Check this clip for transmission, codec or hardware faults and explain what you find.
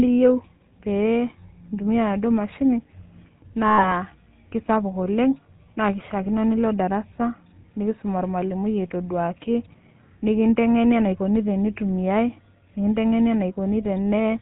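Two faults are present: GSM full-rate coding across the whole recording, and a burst of lost GSM frames early on.

GSM full-rate codec, throughout: The speech has passed through the original GSM codec, which fits its 13 kbps full-rate mode. The codec keeps a vocal-tract filter model and rebuilds the excitation from sparse, evenly spaced pulses, discarding most of the fine detail. Nothing above 4 kHz survives. The damage is plainly audible: the voice sounds buzzy and gravelly, with a coarse, band-limited texture.

Lost GSM frames, from 3.68 to 3.89 s: Part of the transmission was corrupted or dropped. The gap of about 100 ms fits roughly five 20 ms frames. The decoder concealed it by reusing the last good frame's parameters, so the speech there freezes into a rough, metallic ring instead of continuing naturally.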